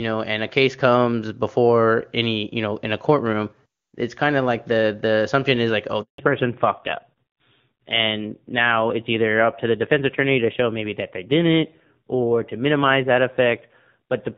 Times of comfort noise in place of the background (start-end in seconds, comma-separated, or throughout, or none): none